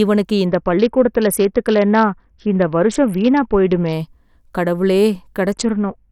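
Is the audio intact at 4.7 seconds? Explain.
Yes, at 4.7 seconds the speech plays through intact, with no dropout, click or distortion at that moment.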